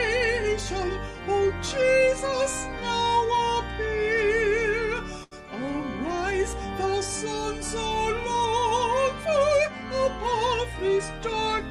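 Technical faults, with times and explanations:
5.23–5.33 s: short stall from a late packet. A packet arrived 80 ms late, so the jitter buffer emptied. The receiver stretched the last sound across those 80 ms, then resumed at the same point. Nothing is missing, but the sound hangs briefly, with a faint buzz or dip.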